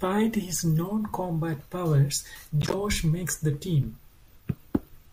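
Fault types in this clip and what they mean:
Corrupt frame decoded: at 2.61–2.74 s, just before "makes the team", damaged frames play anyway, misplacing energy across frequencies as a chirp, squeak, blip or burst of noise peaking around -15 dBFS.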